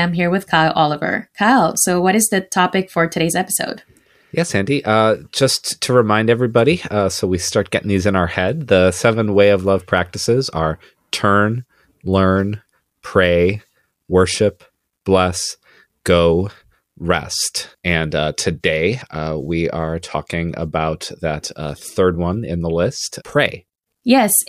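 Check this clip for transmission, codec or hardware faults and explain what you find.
One fault turns up. At 1.75 s, just before "so what is the", there's a block of digital silence about 2.2 ms long: samples dropped to zero without any fade, so it lands as a sharp tick.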